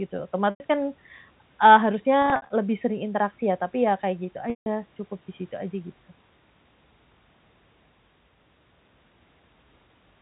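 Speech over a G.711 telephone line, with packet loss with pitch repetition at 0.5–0.6 s, 2.22–2.5 s (scattered gaps, longest 60 ms) and 4.5–4.66 s. Each gap is bridged by a repeated pitch period that fades out over about 50 ms.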